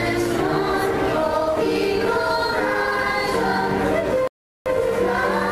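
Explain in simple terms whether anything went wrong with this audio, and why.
Something did go wrong, near the end. At 4.27 seconds the sound suddenly stops and goes silent. It comes back at 4.66 seconds, picking up exactly where it left off. This is a rebuffering stall. The player ran out of downloaded audio and had to pause until more arrived. No sound is missing. The pause simply adds about 0.38 seconds of dead air to the playback.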